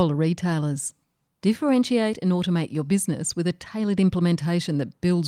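Nothing to flag: no audible technical faults anywhere in the speech.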